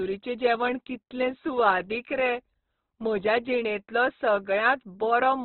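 Opus compression runs through the whole speech clip. Nothing is present above about 4.1 kHz, so the sound is narrowband and dull. The damage is heavy. Each band keeps its energy, but the encoder is short of bits and fills the gaps with folded or noise-like content. Tones turn rough, grainy and hissy rather than swirly. This likely comes from Opus in its music mode, which fits a very low rate near 12 kbps.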